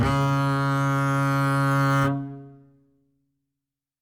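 Listening to this music, nothing stood out as a technical fault at any point.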